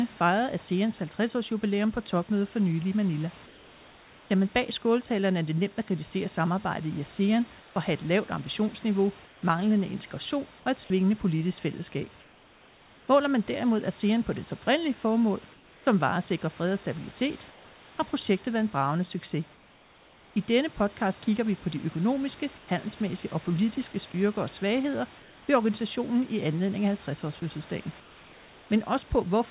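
Around 3.46 to 4.3 s, just before "man bag skåltalerne er", the room tone goes flat and featureless, about 2 dB quieter. That's comfort noise in place of the background, likely the sender's discontinuous transmission filling pauses with synthetic hiss. It returns at 7.6 to 9.42 s, at 12.2 to 13.08 s after "et svingende politisk fællesskab", and at 15.54 to 20.36 s.

From 22.58 to 28.7 s, after "vi på de økonomiske", the sound gets choppy. Quiet bits drop out. That's sound chopped by the voice detector, likely from it toggling transmission on and off repeatedly.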